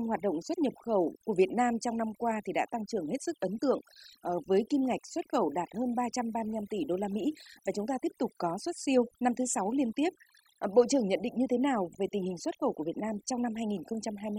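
From start to finish, the pauses between phrases drop to near silence dotted with twinkling specks. That is overdone noise removal: a noise reduction stage set far too aggressively pushes individual frequency bands down or off whenever they come close to its noise estimate, so the quieter components of the speech are stripped away along with the noise.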